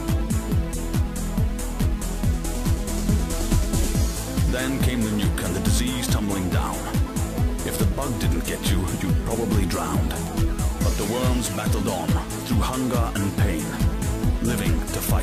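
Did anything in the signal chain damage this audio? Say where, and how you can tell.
No, nothing along the chain seems to have touched this one; there's no point anywhere in the recording where the sound gets mangled, drops out or jumps, so there's nothing to trace back to a stage.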